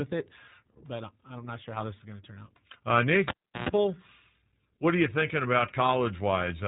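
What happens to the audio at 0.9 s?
At 0.9 s, as throughout, the speech carries iLBC codec damage: 20 ms frames coded independently sound rough and synthetic, and the spectrogram shows a hard ceiling near 3.8 kHz.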